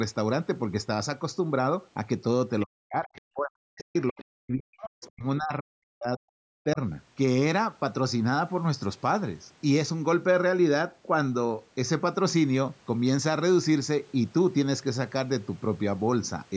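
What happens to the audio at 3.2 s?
Right around 3.2 s the talker's speech is coming back from a deep dip. From 2.65 to 3.16 s the voice sinks, at its worst by roughly 40 dB, for about half a second. This is speech suppressed in double talk. The likely cause is both sides talking at once, with the echo canceller unable to tell the talker from the loudspeaker echo and turning both down.

From 3.15 to 3.21 s a brief, faint scrap of a second voice slips through, roughly 25 dB below the talker. This is the other side's voice leaking through, likely because the echo canceller left a trace of the far-end loudspeaker in the microphone signal. The call's microphone processing, which keeps nothing above 8 kHz, is working normally.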